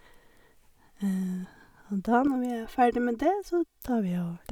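From 2.27 s to 3.81 s the speech takes on a hollow, phasey quality typical of channel delay (comb filtering). One channel runs a few milliseconds behind the other, around 3 ms, and when the pair is summed to mono, the shared content cancels at evenly spaced frequencies. The lowest notch sits near 200 Hz, with further fixed notches stacked regularly above it, thinning the voice and giving it a tubular colour for that stretch.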